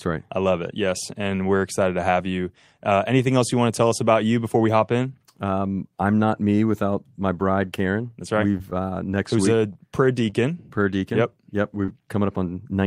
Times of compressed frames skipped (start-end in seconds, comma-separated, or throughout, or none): none